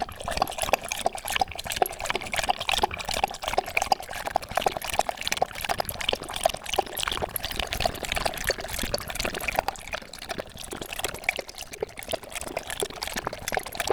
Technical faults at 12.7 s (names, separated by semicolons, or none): buffer tearing